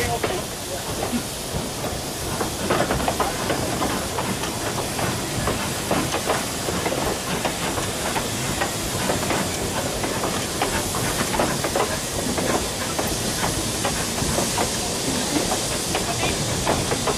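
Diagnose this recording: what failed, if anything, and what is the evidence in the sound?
The codec stage failed: damaged data in a compressed stream. Short blips of garbled sound occur at 1.82–1.86 s, 7.06–7.09 s and 13.05–13.09 s. Corrupted bytes made the decoder misread those frames and lose sync until it found the next valid frame header.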